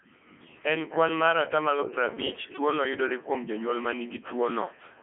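Codec 2 vocoder throughout: the speech is rebuilt from sine waves rather than the original waveform, so it sounds heavily robotic and buzzy, with nothing above 3.8 kHz, consistent with 3.2 kbit/s.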